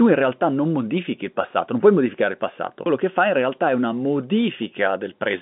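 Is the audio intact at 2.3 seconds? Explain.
Yes, the audio is intact at 2.3 seconds, with the speech carried cleanly through G.711 telephone coding, which holds it to the narrow phone band with nothing above about 3.7 kHz.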